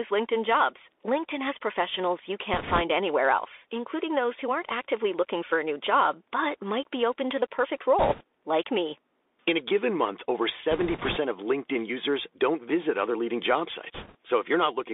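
Throughout, the speech carries the Bluetooth CVSD headset codec. The band runs only from about 300 Hz to 3.6 kHz, consistent with a 64 kbps one-bit delta link. The adaptive step leaves a granular hiss, scratchy s sounds and strain on loud bright passages.

Bit errors on a Bluetooth voice link appear at 2.54–2.81 s, 7.99–8.22 s, 10.71–11.18 s and 13.94–14.16 s. Flipped bits, on the order of a few percent, each nudge the waveform only slightly. Instead of clicks, the speech gains a rushing crackle over those stretches.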